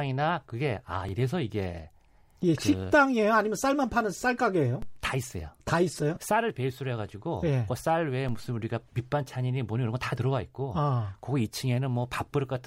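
At 1.09 s a repeated buffer occurs: new audio missed its deadline, so the output replayed the previous 5.8 ms block once, which fits a 256-sample buffer. The hard joins at each end make it a brief click rather than an audible stutter.

At 4.82 s and again at 8.29 s there is a DC step, where the waveform's zero line jumps suddenly and the offset then drains away slowly, as through a high-pass filter of about 2 Hz. Each step is heard as a low thump beneath the speech, which continues unchanged.

From 6.14 to 6.17 s, lost LE Audio frames leave a 22.5 ms gap, which points to three 7.5 ms LC3 frames. The decoder filled it by reusing the last spectrum with randomised signs, so tonal parts of the speech briefly turn into a noisy smear.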